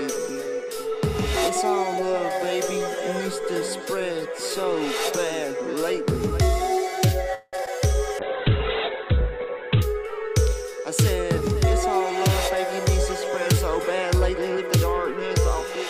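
At 7.34 s the audio stalls in a call audio freeze lasting about 0.19 s. The last sound is stretched into a fading buzz, with a brief silence near its end. The audio then resumes where it stopped, now running about 184 ms later. Delayed packets likely emptied the jitter buffer. Two short concealed packet losses follow, at 7.57 s and from 7.65 to 7.68 s. Each is a tiny smear where the decoder patched over missing audio of 10 to 20 ms. From 8.19 to 9.89 s a call bitrate drop takes hold. The encoder falls from 64 to 10 kbps, and the lowest rate lasts about 1.6 s. The top end is cut from 20 kHz to 4 kHz, so the sound turns muffled and rough.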